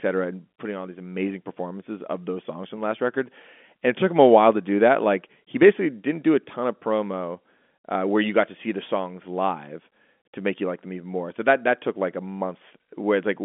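No technical faults are audible.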